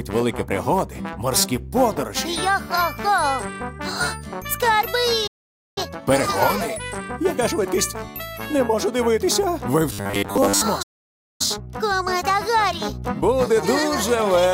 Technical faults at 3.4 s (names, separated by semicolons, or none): none